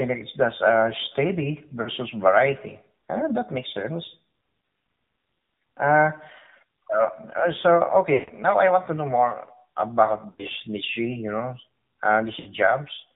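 Throughout, the AMR narrowband mobile codec confines the speech to about 150 Hz to 3.7 kHz, with a buzzy, synthetic texture that fits a low mode near 7.4 kbps. Lost AMR speech frames at 1.82–1.89 s, 8.14–8.31 s, 10.30–10.45 s and 12.40–12.49 s each draw the sound out and let it fade as the decoder repeats its last settings with falling gain.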